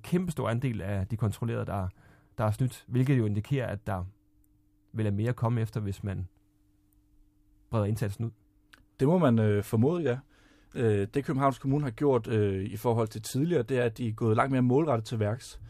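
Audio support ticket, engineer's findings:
Loud pop, 3.07 to 3.09 s. Single sharp pop, roughly 5 dB above the speech level, lasting about 20 ms; speech continues uninterrupted underneath. Likely cause: a voltage step or pulse from a connector, switch, static discharge or driver glitch. Downstream circuitry shapes the pulse into the audible pop. Check cabling and plugs first, then driver logs around that time.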